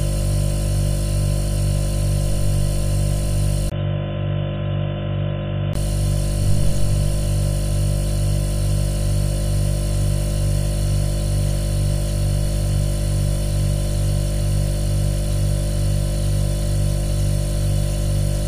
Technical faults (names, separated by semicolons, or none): input switched to a poorer device